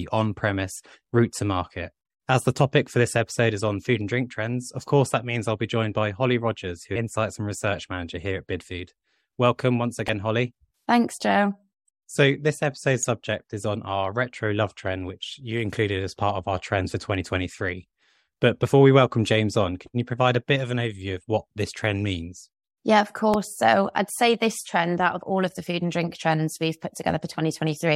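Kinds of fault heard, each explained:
Damaged data in a compressed stream: Corrupted bytes in the encoded speech made the decoder misread frames and lose sync. Three very short glitches result, each under 20 ms. They fall at 10.08, 13.03 and 23.34 s, the second between "this episode's" and "subject is on our".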